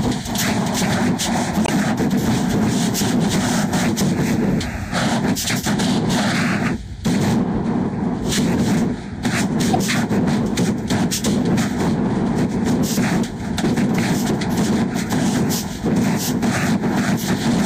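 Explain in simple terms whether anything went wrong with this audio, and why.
Two brief glitches stand out, a short blip from about 1.64 to 1.70 s and another from 9.73 to 9.76 s. Both are damaged data in a compressed stream: a few bytes of the file were corrupted, so the decoder misread those frames before recovering.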